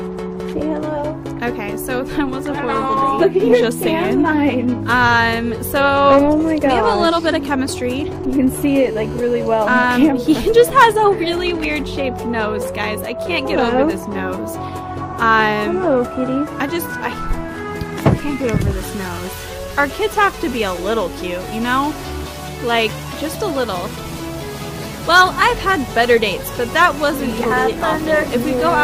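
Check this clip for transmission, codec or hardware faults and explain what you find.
Two bursts of mobile-phone interference sit back to back, with no codec or transmission faults on top.

From 7.68 to 8.64 s there are GSM signalling bursts: a nearby 2G handset pinging the network in short groups, which the audio circuitry rectifies. You hear a galloping dit-dit-dit of brief 217 Hz buzzes, roughly 30 dB under the programme.

Right after, from 8.68 to 9.91 s, it becomes full GSM phone buzz. The handset is now transmitting continuously at 217 bursts per second, as in a call, and the rectified pulses give a hard, raspy 217 Hz buzz full of harmonics, about 28 dB below the signal.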